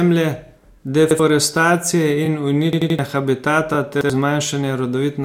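At 0.47 to 0.49 s there is a repeated frame: a single compressed block of about 23 ms was decoded twice, so a sliver of speech plays again and the clip grows by 23 ms. It sounds like a tiny stutter. On the waveform, an identical 23 ms segment appears back to back.

From 1.11 to 1.20 s comes a repeated buffer. Fresh audio arrived late, so the device replayed its last block of about 85 ms, which fits a 4096-sample buffer. About a tenth of a second of speech is lost and replaced by a hard-edged stutter. The same frames recur exactly, with a sharp step at each boundary.

The repeated frame returns at 2.25 to 2.27 s. From 2.73 to 2.99 s the buffer repeats three extra times. This produces a machine-gun stutter of four identical 85 ms slices and drops roughly a third of a second. The spectrogram shows a periodic tiled pattern there, split by vertical click lines.

A third repeated frame follows at 3.73 to 3.76 s, and a final single buffer repeat at 4.01 to 4.10 s.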